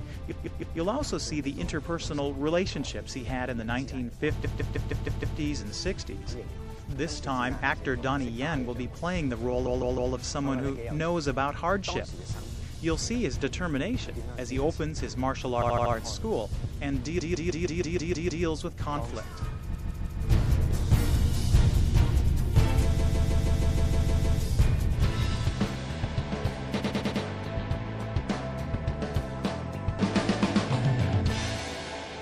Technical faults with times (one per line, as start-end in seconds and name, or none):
0.00-32.21 MP3 compression
0.30-0.77 repeated frames
4.43-5.37 repeated frames
9.65-10.12 repeated frames
15.61-15.92 repeated frames
16.64-16.67 loud pop
17.18-18.43 repeated frames
19.74-20.21 repeated frames
22.98-24.39 repeated frames
26.79-27.21 repeated frames